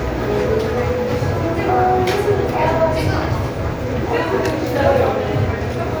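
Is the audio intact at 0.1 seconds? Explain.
Yes, the sound at 0.1 s is intact, with no audible fault at that moment.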